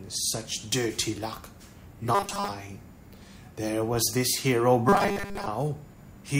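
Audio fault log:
2.15–2.49 s and 4.89–5.47 s, robotic sound from repeated short buffers: both spans turn into a rigid, metallic buzz at 200 Hz that tracks the underlying sound only loosely. The likely cause is audio arriving too seldom, so a 5 ms fragment is looped to fill the gap while roughly 70 percent of the real material is skipped. A spectrogram shows evenly spaced harmonics at multiples of 200 Hz, and the waveform shows a short, repeating cycle.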